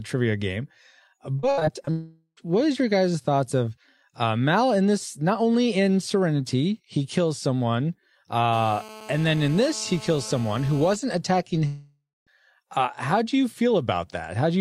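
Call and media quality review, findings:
Repeated packet loss (robotic sound), 1.39–1.89 s: five gaps in the jitter buffer stream, longest 66 ms, about a third of the span concealed. The concealer repeats the last sound, so the audio turns choppy, with pieces missing.

Long network dropout, 1.91–2.39 s: stream likely stalls right after the loss burst, about 0.46 s of audio never arrives. Concealment stretches the last sound into a fading buzz, then about 60 ms of silence before playback resumes.

Long network dropout, 11.67–12.29 s: another stall, about 0.6 s lost, likely a network outage. Fill fades out, leaving about 230 ms of silence; audio picks up further on with the gap missing.

GSM phone buzz, 8.53–10.96 s: a nearby 2G handset on a call pulses at 217 Hz, rectified by the analogue audio front end. This gives a hard, raspy, harmonic-rich buzz at about 19 dB below the signal, nearly steady and independent of the audio.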